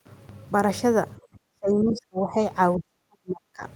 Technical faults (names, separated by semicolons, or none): speech suppressed in double talk; other side's voice leaking through